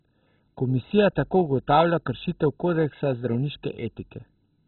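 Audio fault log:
throughout, MP2 compression: dull speech, nothing above 4 kHz, gurgling granular grit unlike a clean low-pass; likely starved Layer II sub-bands, fitting about 16 kbps.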